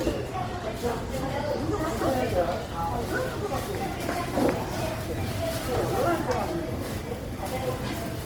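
Opus compression, throughout: plainly grainy, rough, noisy tones, likely from Opus music-mode coding near 24 kbps filling bit-starved bands with folded spectrum or noise.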